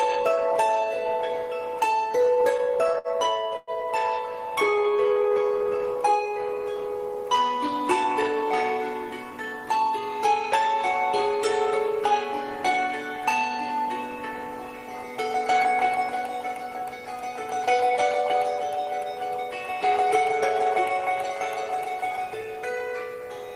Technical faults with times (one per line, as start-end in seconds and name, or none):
2.07-3.70 repeated stalls (stutter)
4.46-5.79 jitter buffer slow-down
7.67-10.74 jitter buffer speed-up
11.50-12.78 jitter buffer speed-up
18.63-19.06 jitter buffer speed-up